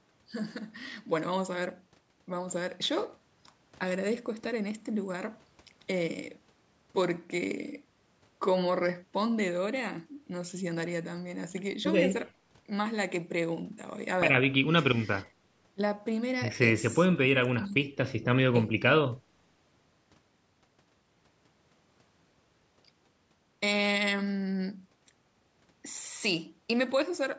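Nothing stood out on listening to this speech; the missing content above 8 kHz and the trimmed lowest bass come from the call's normal microphone processing.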